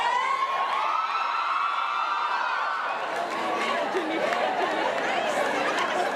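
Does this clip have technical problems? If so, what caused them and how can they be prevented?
Yes: a doubled audio track starts abruptly at 4.23 s and runs to the end. A full-band copy trails the original by roughly 0.7 s at a somewhat lower level, with no decay or room colour, likely from a second, slower capture path mixed back in. To prevent it, route each source through only one capture path and mute any monitoring or loopback return before recording.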